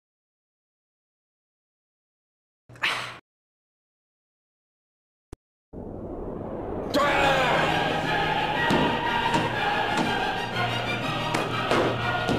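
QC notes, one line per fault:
Nothing stood out on listening, and there is no fault to log.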